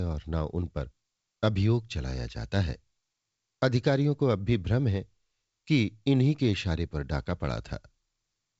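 No technical faults occur at any point in the speech, which comes through G.722 wideband telephone coding at 64 kbit/s with nothing above about 7.7 kHz.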